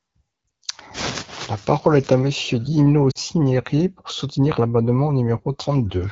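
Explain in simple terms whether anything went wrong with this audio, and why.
Two short dropouts come from lost AMR speech frames, at 0.47 to 0.49 s and 3.11 to 3.18 s. Radio errors corrupted the data, so the HD Voice decoder filled the gaps by repeating the last good sound at falling volume, heard as a brief dip or warble at 0.47 s and a quick fade to near silence at 3.11 s.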